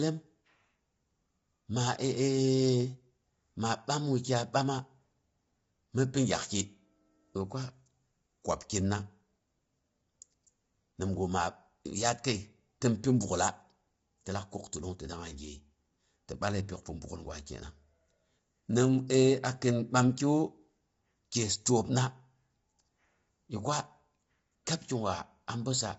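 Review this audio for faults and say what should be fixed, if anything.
Across the whole recording the speech sounds rough and grainy, with a hiss-like fill between the pitch harmonics and nothing above 7.7 kHz, so the top end is dull. The damage is plainly audible. This is likely low-delay AAC compression (AAC-ELD), whose short frames resolve harmonics poorly and spend bits inefficiently, and the degradation fits a bitrate around 24 kbps. To prevent it, raise the AAC-ELD bitrate or use a higher-efficiency codec where low delay isn't required.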